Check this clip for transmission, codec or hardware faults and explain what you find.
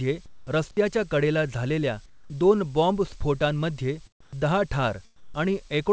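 There is one recurring fault: comfort noise in place of the background at 0.26–0.47, 2.06–2.30, 4.21–4.33 and 5.16–5.34 s. During these pauses, likely from discontinuous transmission, steady synthetic hiss replaces the real background and drops about 4–8 dB. On a spectrogram each gap shows flat, featureless texture, and the waveform dips. The call path's spectrum stops at 8 kHz, which fits G.722.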